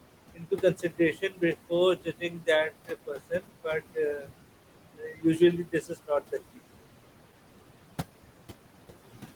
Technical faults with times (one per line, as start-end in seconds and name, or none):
0.00-9.35 noise suppressor artifacts
0.34-1.71 speech cut by the noise suppressor
1.96-2.48 speech cut by the noise suppressor
2.87-3.66 speech cut by the noise suppressor
4.97-5.40 speech cut by the noise suppressor
5.65-6.33 speech cut by the noise suppressor